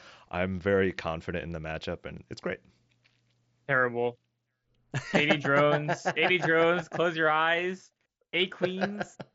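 There are no technical faults to describe in time order anywhere in the speech, which comes over a Bluetooth mSBC headset link with nothing above about 7.7 kHz.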